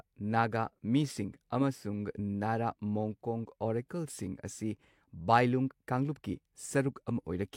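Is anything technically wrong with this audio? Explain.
No, nothing is technically wrong with this audio.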